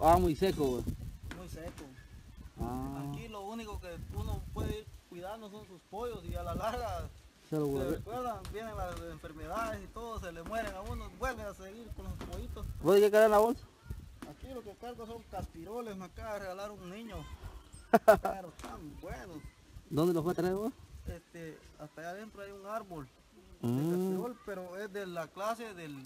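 Throughout the clip, a filter restarted on every block drops its memory and begins each block from silence, adding a small transient at every boundary. The result is a 375 Hz buzz, which fits a 128-sample block, rising and falling with the sound's level. A waveform shows evenly spaced spikes; a spectrogram shows a harmonic comb at 375 Hz multiples.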